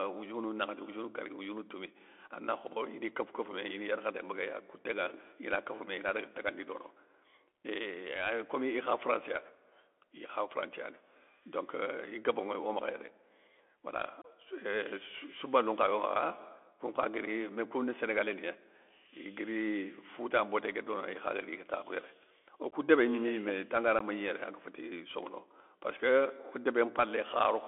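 From start to end, the speech carries Bluetooth CVSD headset codec damage. Sound sits between 300 Hz and 3.4 kHz, with scratchy s sounds and granular hiss, fitting a 64 kbps CVSD link.

Unconcealed Bluetooth headset packet loss leaves abrupt holes: 26 ms from 14.22 to 14.26 s, then 15 ms at 22.71 and 23.99 s. Each sounds like a short dropout.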